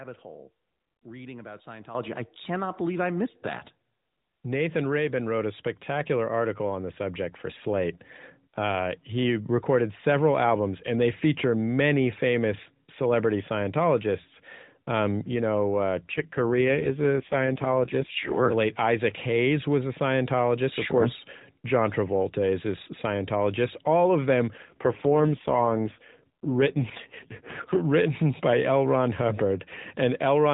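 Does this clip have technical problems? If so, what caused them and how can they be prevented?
Yes. Two AMR rate drops occur, from 16.12 to 18.46 s and from 24.58 to 27.81 s, where the speech turns buzzy and synthetic, which points to the codec falling from 12.2 to 4.75 kbps to spend bits on error protection. On a spectrogram the narrowband 4 kHz ceiling and continuity remain, but harmonics blur. Keeping a stronger radio link prevents the network from forcing the lower rate.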